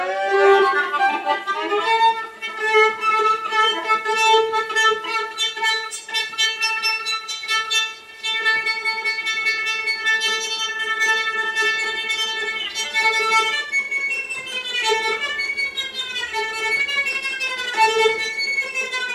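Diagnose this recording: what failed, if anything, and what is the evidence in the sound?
Nothing failed: no stage in the chain, from wiring through conversion, processing, transmission and storage to playback, leaves any audible trace anywhere in the recording.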